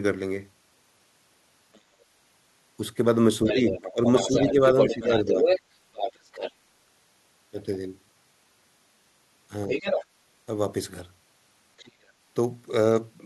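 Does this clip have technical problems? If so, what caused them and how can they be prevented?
Yes. Other side's voice leaking through occurs at 1.73–1.80 s (very faint), 3.45–5.61 s (as loud as the talker), 5.94–6.52 s, 9.68–10.05 s (somewhat quieter) and 11.78–12.11 s (faint), likely from loudspeaker playback re-entering the microphone that the echo canceller failed to remove. A headset or better-tuned echo cancellation prevents it.

Speech suppressed in double talk appears at 3.46–5.44 s, overlapping the loudest leak. The talker's level drops by up to about 5 dB for roughly a second in total, likely because the canceller attenuated both voices during simultaneous talk. A stronger double-talk detector prevents this.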